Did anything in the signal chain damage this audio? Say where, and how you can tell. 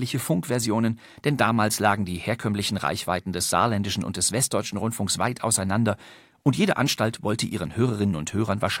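Yes. At 7.55 s in the speech there is one sharp click, a thin vertical line across the spectrum. The likely cause is dropped samples in the driver or buffer stage: roughly a single sample went missing, so the waveform jumps straight to a later value.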